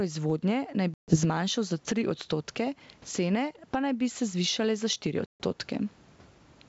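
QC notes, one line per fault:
throughout: gain pumping. Background noise swells in gaps and ducks by about 15 dB under each loud syllable, likely from overdriven gain hitting a fast limiter, unlike steady noise.
0.94–1.17 s and 5.26–5.44 s: packet loss on an ADPCM call. Each has a hard-edged 140 ms silent hole, then speech returns slightly distorted while the decoder's predictor resyncs.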